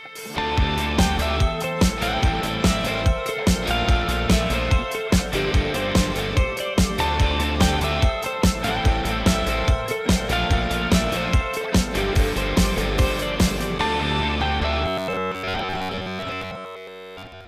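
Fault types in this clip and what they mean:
Robotic sound from repeated short buffers: from 14.86 s to 17.47 s the sound turns into a stiff metallic buzz pitched near 94 Hz, likely because audio arrived too seldom and slices of about 11 ms were looped for most of that stretch.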